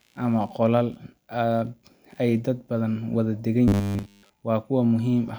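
Ground currents from the computer's changing processor, graphics or mouse load leak into the audio circuit, producing computer activity noise across the whole clip: a faint buzzing, chirping pattern pulsing at around 70 Hz, sitting roughly 45 dB below the speech and shifting with machine activity rather than with the talking.

From 3.68 to 4.34 s, new audio likely arrived too slowly, so the software kept replaying a short slice, which fits a buffer of about 10 ms, while most of the real audio was skipped. This robotic sound from repeated short buffers forces a rigid, metallic 100 Hz buzz onto the speech, which still loosely tracks its shape.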